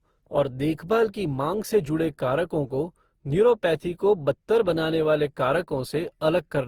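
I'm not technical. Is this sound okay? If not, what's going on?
No. The speech has a swirly, watery, hollow quality from start to finish, and the starts of sounds are blurred instead of crisp. This is most likely generation loss: the recording was compressed and decompressed around seven times, which fits repeated passes through a format such as Opus. Each pass discards a little more detail in slightly different places, so the damage accumulates and the voice smears more than a single compression would cause.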